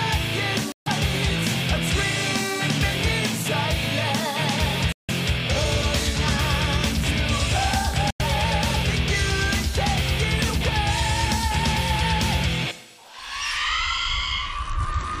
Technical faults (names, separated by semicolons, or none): Bluetooth dropout